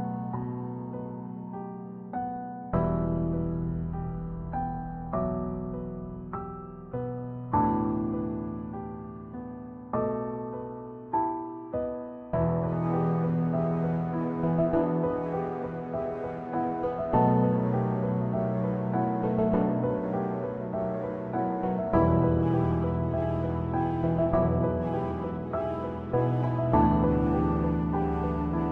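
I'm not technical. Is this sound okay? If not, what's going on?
Yes, the sound is fine, with no technical problems to hear anywhere in it.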